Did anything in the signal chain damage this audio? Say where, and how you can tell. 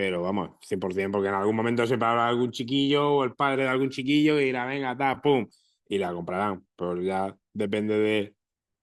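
No, nothing in the signal chain damaged this audio at any stage.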